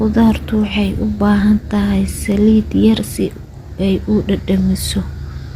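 Speech with three short bursts of DAB burbling, at 0.96–1.06 s, 2.91–3.00 s and a quick blip at 4.58 s. Weak reception lets a small trickle of bit errors slip past error correction, so wrong samples put short noise blips in single sub-bands and wrong scale factors make sub-bands jump in level for up to a frame.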